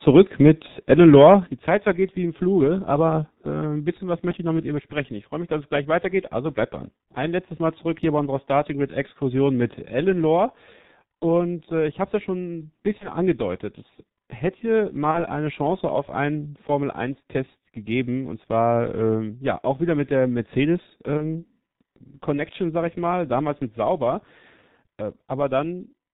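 The whole recording carries heavy G.723.1 codec damage. The speech sounds muffled and hoarse, with nothing above 4 kHz and smeared consonants. The coarse 30 ms frames and thin spectral model fit a stream near 6.3 kbit/s.

From 0.91 to 1.34 s the loudest syllables turn harsh and crackly. Their peaks are flattened at the ceiling, about 3 dB past it, across a few percent of samples. This is likely microphone overload, with input gain set too high for the converter.

At 1.47 s the speech and background drop together by about 7 dB in one step. Coming right after the distorted peaks, this sounds like the microphone volume stepped down automatically. The software cut the input level once to stop the clipping.

Three short gaps show VoIP packet loss concealed by the speech codec: 12.98 to 13.09 s, 15.11 to 15.18 s, and 21.17 to 21.45 s. Each fits one lost 30 ms frame. The decoder stretches the last sound into a buzzy tone or coloured noise that fades. 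The speech stays weak until recovery, longest at 21.2 s.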